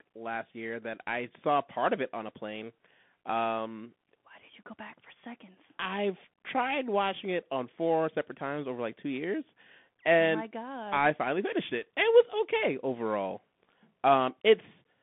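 Throughout, a Bluetooth CVSD headset codec confines speech to about 150 Hz–3.5 kHz, leaving the spectrogram bare above 3.8 kHz. Its one-bit step coding makes sibilants scratchy over granular hiss.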